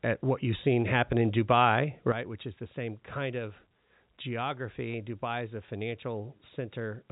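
A sudden gain jump at 2.12 s drops the speech and its background noise together by about 9 dB until the end, likely a digital gain step applied without a ramp. Packet loss with pitch repetition at 5.66 to 5.68 s leaves a 20 ms gap, which fits a single lost packet. The receiver bridges it by repeating the last pitch period, heard as a brief, slightly buzzy hold within the band-limited G.711 telephone sound.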